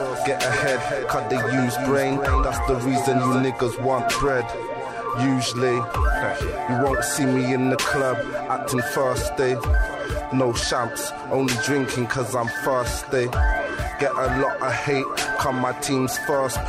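From the start until 3.42 s the clip carries a doubled audio track: a second full-band copy trails by about a third of a second, a few dB quieter, likely from a slower parallel capture path. Unlike an echo or reverb, it has no decay or room colour and simply cuts off abruptly.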